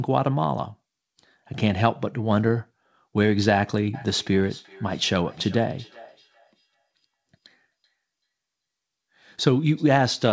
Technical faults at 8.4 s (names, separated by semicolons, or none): feedback echo between two devices